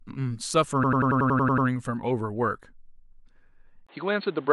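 A speech recording with two distinct faults. From 0.84 to 1.67 s the audio stutters like a machine gun: one slice of about 93 ms repeats exactly nine times at a rate of 10.8 Hz before the speech carries on. This is a system hang loop. The computer or its audio driver stalled while the hardware kept replaying the same ring buffer, and a loop of that length fits a 4096-sample buffer. From 3.87 s to the end, the speech turns dull and narrower after a brief 20 ms gap. Nothing remains above 4.4 kHz, a new background noise sits roughly 30 dB below the speech, and the level stays about the same. The likely cause is the input switched to a poorer device mid-recording, such as a second microphone or a headset's call mode, which brings its own restricted bandwidth and noise floor.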